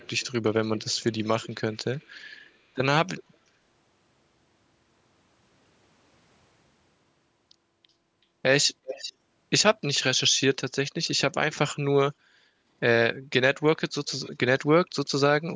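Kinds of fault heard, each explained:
Echo leak: a copy of the speech trails about 0.37 to 0.39 s behind, loudest near 8.9 s, likely leaking past a speakerphone's echo canceller.
Background gated by the echo canceller: around 12.45 s the room sound dips by about 8 dB for roughly 0.2 s while the canceller clamps the microphone.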